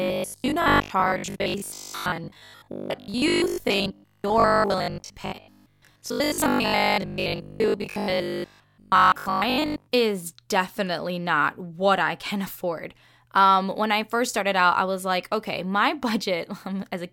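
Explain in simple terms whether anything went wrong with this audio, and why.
From 0.02 to 9.92 s, before "is definitely not what", the speech has robotic sound from repeated short buffers: a rigid 50 Hz buzz, likely from replayed 20 ms chunks.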